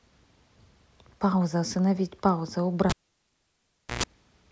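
At 2.90 s, cable pulled and plugged in: a pop, 1.09 s of near silence, 60 Hz buzz as stacked horizontal lines, a pop at 4.03 s.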